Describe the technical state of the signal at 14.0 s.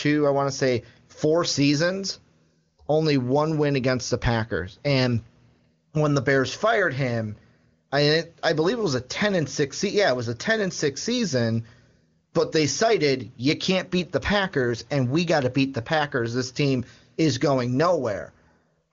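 At 14.0 s the audio is intact, with only the usual band limit of an AMR wideband (HD Voice) path, which leaves nothing above roughly 7 kHz.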